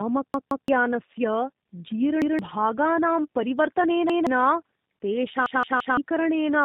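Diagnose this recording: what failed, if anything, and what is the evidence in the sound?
Codec stage: tandem speech coding, with two speech coders in a row. The sound points to AMR-NB, then G.711 mu-law, then G.729A, decoded and re-encoded at each border. Each coder degrades the last one's output, leaving speech rough, muffled and warbly throughout, with nothing above 3.6 kHz.

Driver or buffer stage: a repeated buffer at 0.34–0.68 s, 2.22–2.39 s, 4.10–4.27 s and 5.46–5.97 s. A 170 ms piece, which fits an 8192-sample buffer, replays one to three extra times with hard joins when new audio arrived late. Roughly 150 to 500 ms of audio is lost at each.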